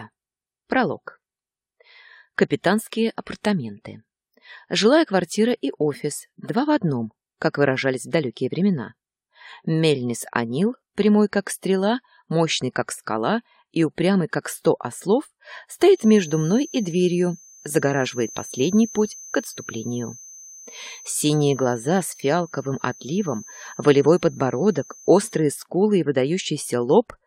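From 15.87 s to 25.47 s a thin, steady whistle sits behind the sound at about 6.2 kHz, roughly 20 dB under the main signal and swelling and fading slowly in level. That's a feedback whistle. The likely cause is a loudspeaker-to-microphone loop running right at the edge of feedback, so that single frequency keeps ringing without ever building up into a full howl. It just hangs there for nearly ten seconds.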